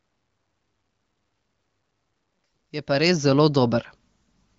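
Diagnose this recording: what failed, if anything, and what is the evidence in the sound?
Nothing in this speech recording stood out as a failure on listening.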